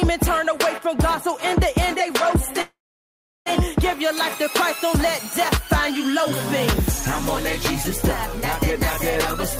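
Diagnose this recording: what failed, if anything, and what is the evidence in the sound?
Call audio freeze from 2.61 to 3.48 s: a fading buzz, then silence, then the sound resumes, running about 0.85 s late. Likely a network stall drained the jitter buffer.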